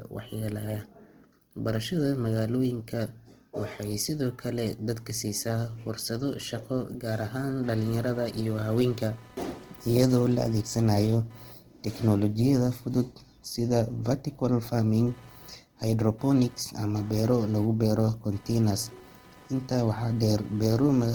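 From the start, the speech sounds grainy and rough, with tones turned noisy. The likely cause is Opus compression in music mode, at a low rate near 16 kbps.

At 6.40 s, after "kale dadka siisaa fursado", computer activity noise begins. The computer's load changes disturb the audio ground, leaving a buzz pulsing around 300 times per second, about 30 dB down, until the end.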